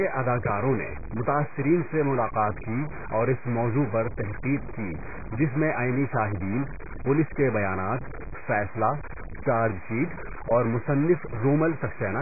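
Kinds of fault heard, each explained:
Stuck bit: The likely cause is one data bit held permanently at 0 or 1, through a broken line or a converter fault, so roughly half of all sample values are pushed off by that bit's weight in a pattern that follows the waveform. Throughout the speech this produces distortion on the voice, and because the error also flips with the sign of small values, the pauses between phrases fill with a steady bed of noise rather than silence.
AAC compression: The speech has been coded with AAC-LC at a very low rate, which fits something around 12 kbps, and at that rate the encoder discards most of the spectrum to stay within budget. Nothing survives above 2.5 kHz, so the whole clip sounds muffled and dull, with consonants losing their edge. The remaining bands are coarsely quantised, giving a smeared, warbling texture on held vowels and a fizzy, watery quality where sibilants should be.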